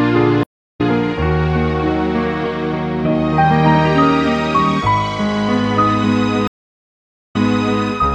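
At 0.43 s the connection drops, and the player reconnects with a fresh decoder mid-stream: a stream reconnect. The audio goes silent for 347 ms and returns at about 0.81 s, having skipped roughly a fifth of a second of material. A second stream reconnect at 6.47 s behaves differently. The server resends a burst, so after 857 ms of silence the sound resumes 470 ms earlier than where it broke off, replaying a short stretch before running on to 7.80 s.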